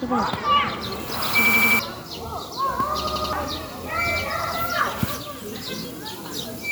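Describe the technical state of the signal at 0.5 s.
At 0.5 s the audio is intact, with no technical fault audible at that moment.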